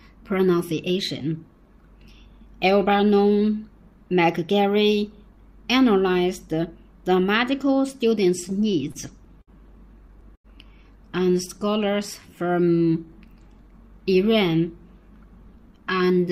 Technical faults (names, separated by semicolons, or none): repeated stalls (stutter); short stall from a late packet; jitter buffer slow-down; jitter buffer speed-up